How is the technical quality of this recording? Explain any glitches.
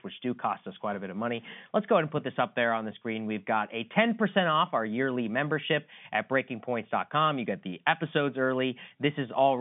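No glitches or faults heard.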